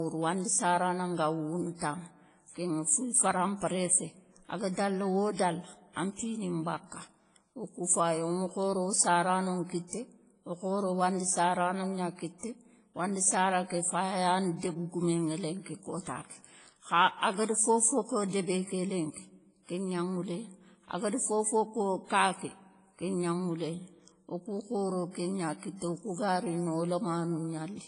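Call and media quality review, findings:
Ringing, washy sound with hiss that breathes with the speech, throughout. Likely WMA compression, heavy, at a rate that fits about 24 kbps; coarse long-block quantisation. Spectrogram: hard ceiling near 10.1 kHz, weak partials zeroed into patchy holes.

Pre-echo, 1.76–1.81 s: short hiss leads a sharp attack, which sounds smeared. Transform block spreads noise sized for the loud onset back over about 58 ms of quiet. Waveform: low fuzzy ramp before the transient; spectrogram: broadband smear ahead of it.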